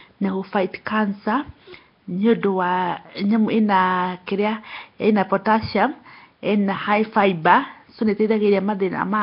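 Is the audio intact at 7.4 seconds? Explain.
No. At 7.4 seconds, as throughout the whole clip, the speech carries a rough, hissy halo and a smeared, underwater character, and nothing is heard above about 5.3 kHz. This is likely Nellymoser compression, the old Flash microphone codec, which codes short blocks at a fixed, very small bit budget. Weak bands receive no bits and are filled with noise, and the heavy damage here fits a bitrate of roughly 22 kbps.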